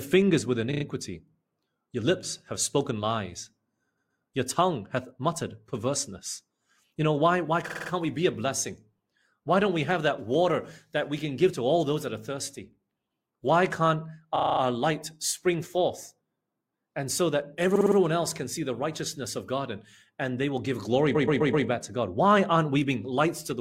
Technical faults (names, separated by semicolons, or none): repeated frames